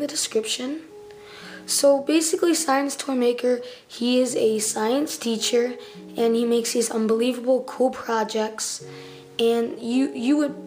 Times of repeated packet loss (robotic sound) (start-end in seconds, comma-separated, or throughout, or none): none